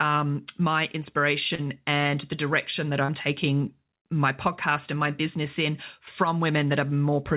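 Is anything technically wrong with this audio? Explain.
Yes. Short concealed packet loss occurs at 1.55 to 1.61 s (just before "and the direction that"), 3.05 to 3.11 s (just before "taking my podcast and") and 3.98 to 4.04 s (just before "my podcast and my"). Each time about 30 ms of the G.711 mu-law call stream, band-limited to 4 kHz, arrived too late. The receiver extended the preceding sound to cover the gap and then blended back, leaving a brief smear or wobble.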